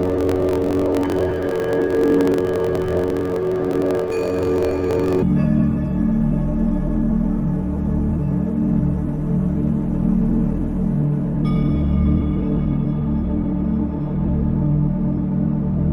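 From 0.0 to 5.24 s, planar audio read as interleaved: 21.8 ms blocks replay at double speed, an octave high, with a 45.9 Hz buzz showing as vertical spectrogram striping.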